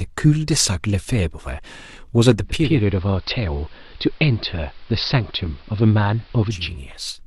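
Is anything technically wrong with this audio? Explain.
Yes. From 2.41 to 6.90 s, digital radio blending to analogue: the receiver cross-fades over 434 ms to the AM feed, dropping about 2 dB, with hiss roughly 30 dB down.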